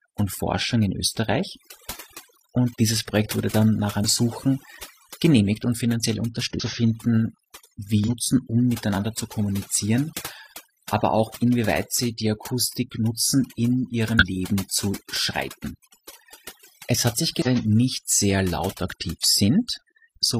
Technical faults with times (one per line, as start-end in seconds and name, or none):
0.00-20.40 overdone noise removal
4.00-4.05 damaged data in a compressed stream
6.55-6.61 damaged data in a compressed stream
8.04-8.09 damaged data in a compressed stream
14.17-14.23 damaged data in a compressed stream
17.42-17.47 damaged data in a compressed stream